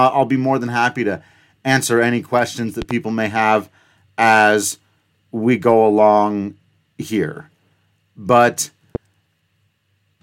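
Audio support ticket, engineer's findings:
Voltage step or pulse entering the signal path, likely a plug, switch, static or driver glitch. Loud pop: double pop 2.82–2.94 s, about 10 dB above the speech; single pop 8.95–8.98 s, about 5 dB above. Speech continues underneath both.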